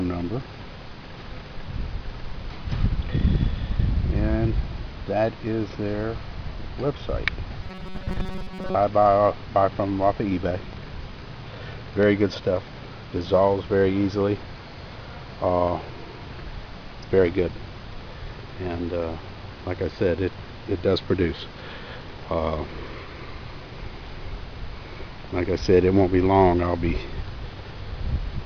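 From 7.63 to 8.75 s, robotic sound from repeated short buffers: a rigid metallic buzz near 188 Hz, likely from short audio buffers being looped while most real audio was skipped.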